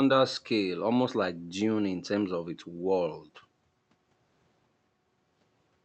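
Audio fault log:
No fault is logged for this speech audio.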